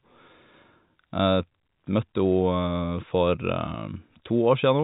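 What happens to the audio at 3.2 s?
At 3.2 s the speech continues intact, with nothing breaking the signal beyond the usual telephone-band sound of G.711 coding, which carries nothing above about 3.8 kHz.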